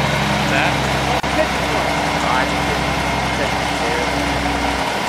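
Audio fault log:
1.20–1.23 s, gap at a join of encoded pieces: the sound drops out for about 33 ms with smeared edges, then resumes where it stopped. Separately encoded sections were joined untrimmed, so the encoder's start-up delay and last-frame padding remain as silence.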